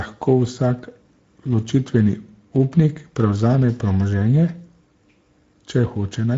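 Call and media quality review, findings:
Speex codec, throughout. Encoder at a middle setting, consistent with about 17 kbps wideband. Too few bits for CELP excitation, so speech comes out noisy and hoarse, with plainly audible coding damage. Nothing above 7.7 kHz. The band above 4 kHz sounds like shaped noise fill rather than real speech detail.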